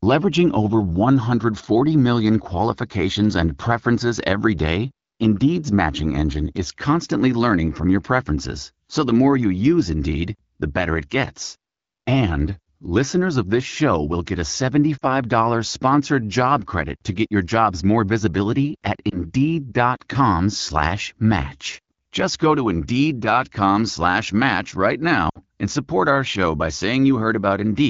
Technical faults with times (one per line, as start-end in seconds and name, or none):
14.98-15.04 lost AMR speech frames
19.09-19.17 lost AMR speech frames
25.29-25.38 lost AMR speech frames